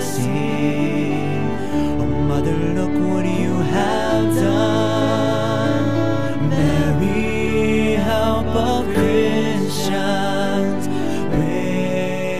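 At 3.81 s there is a single sharp click. It points to dropped samples: a fraction of a millisecond was likely lost from the stream. The waveform jumps straight to a later value. Nothing audible goes missing, but that jump clicks.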